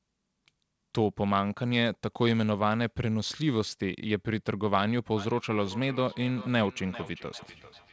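From 5.17 s to the end, the speech carries a feedback echo between two devices. A second device replays this microphone's sound, and the microphone picks it up again. Each word returns about every 0.4 s, at most about 17 dB below the speech, thinner and ringing.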